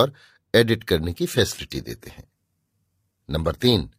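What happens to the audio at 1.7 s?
At 1.7 s the adaptive stream is at a lower bitrate, from 1.27 s to the end. The quality drops suddenly with no gap. Treble drops and nothing remains above 14.9 kHz, which fits a fall from about 96 to about 20 kbit/s.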